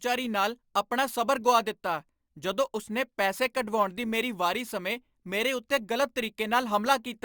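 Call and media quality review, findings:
Crude rate conversion, throughout: gritty inharmonic fizz riding the speech, roughly 20 dB down. Resampler repeating samples without filtering, consistent with a 32 kHz to 48 kHz step.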